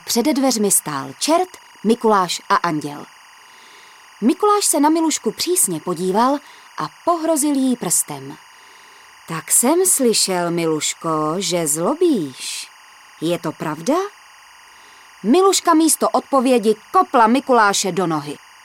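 There's timecode bleed running under the audio from start to finish: a steady chirping warble flipping between pitches around 1 kHz and 2 kHz, sitting roughly 30 dB below the main sound. That's linear timecode leaking in from a neighbouring track or cable, and its rhythm fits 23.976 fps code.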